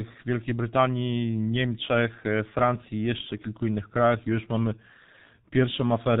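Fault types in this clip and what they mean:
G.723.1 codec: throughout, the speech is heavily muffled and hoarse, with nothing above 4 kHz and smeared consonants, fitting this 30 ms-frame coder near 6 kbit/s.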